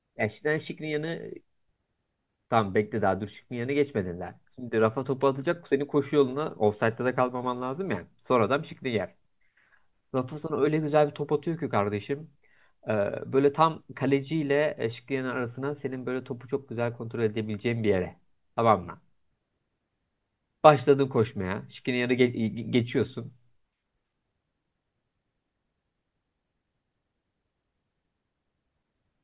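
No technical faults can be heard anywhere in the recording. There are no events to place in time order, so no timestamps apply.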